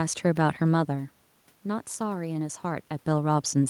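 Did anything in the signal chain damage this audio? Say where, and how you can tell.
No, nothing in the signal chain stood out as damaging this speech on listening; the room noise and the level shifts around 0.5 s and 2.5 s, where the talker moves relative to the microphone, belong to the recording itself.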